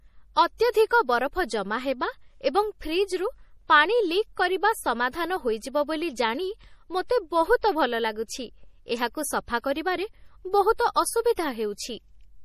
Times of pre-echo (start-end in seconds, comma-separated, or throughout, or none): 0.57-0.74, 7.61, 10.76-10.79, 11.36